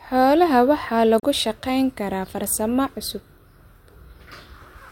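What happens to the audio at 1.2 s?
A digital broadcast dropout cuts the speech from 1.20 to 1.24 s. A corrupted frame was muted, likely a single one. The sound fades out in 3 ms, leaving a 32 ms hole.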